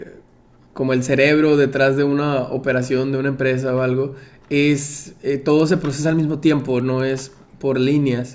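From 4.9 to 7.5 s a steady 10 Hz tick rides on the speech, caused by a resampler restarted on every block. Each 100 ms block was converted alone, leaving an error at its edges. A spectrogram shows faint vertical lines every 100 ms, and the waveform shows tiny steps at the boundaries.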